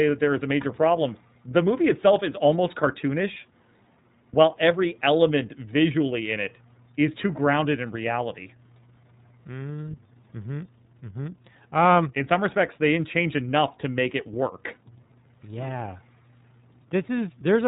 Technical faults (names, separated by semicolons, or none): iLBC codec